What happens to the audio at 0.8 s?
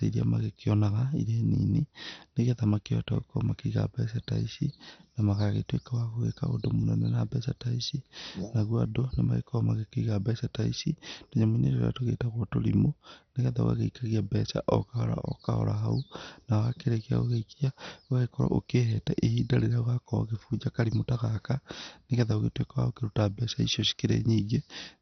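At 0.8 s, as throughout, the speech is dull and gurgling, likely from heavy MP2 compression at a low bitrate near 48 kbps. A spectrogram shows nothing above 6.1 kHz and flickering, patchy upper sub-bands.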